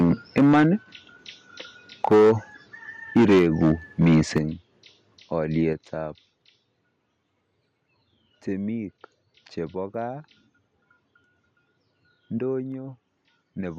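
From 0.0 to 0.67 s the speech shows microphone overload, most likely from input volume set far too high, driving peaks about 12 dB past the converter's limit. A small share of the waveform peaks are flattened, and the loudest syllables take on a harsh, crackling edge. At 0.38 s the microphone volume steps down by about 2 dB, a sudden drop in level for speech and background alike. Overload returns from 2.04 to 2.32 s (about 9 dB over, with nearly a third of peaks clipped) and from 3.16 to 3.72 s (about 9 dB). Within that span, at 3.39 s, the level steps down by about 3 dB. Clipping recurs from 4.01 to 4.38 s (about 6 dB over), followed immediately at 4.38 s by a drop of about 8 dB. A final step of about 5 dB comes at 5.73 s. On the waveform the clipped stretches show squared-off tops, and a spectrogram shows broadband smearing above the speech harmonics. Each gain step appears as an abrupt shrink in waveform height and a uniform dimming across all frequencies.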